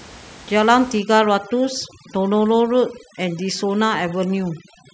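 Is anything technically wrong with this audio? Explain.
Yes. From 0.99 s to the end of the clip, the speech suffers from overdone noise removal. A noise reduction stage set too aggressively pushes individual frequency bands far down whenever their level sits near its noise estimate. Softer parts of the voice fall below that threshold and vanish along with the noise. The background drops and breaks up into twinkling specks. The room noise underneath sits about 22 dB below the speech.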